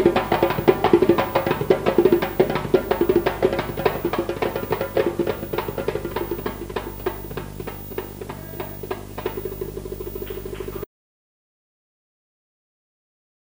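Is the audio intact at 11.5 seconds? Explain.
No, an audio dropout to silence runs from 10.84 s to the end: the input was likely lost mid-flow, leaving total silence without room tone.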